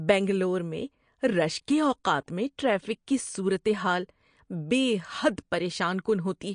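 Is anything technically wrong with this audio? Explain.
Yes. Throughout the speech, the sound likely went through MP3 compression at a low bitrate, with damage that is plainly audible. Short of bits, the encoder drops everything above 9.8 kHz and discards weaker frequency lines, which then flicker in and out from frame to frame. The damage fits a bitrate around 48 kbps. The result is dull, watery speech whose s sounds turn swirly and metallic, with consonant onsets smeared rather than crisp.

At about 2.04 s, just before "میں ٹریفک کی صورت", there is pre-echo. A sharp onset lands late in a transform block, and the encoder spreads the quantisation noise meant for that loud moment across the whole block, including the quiet stretch ahead of it. About 11 ms of hiss appears before the attack, so the onset arrives softened and blurred instead of clean.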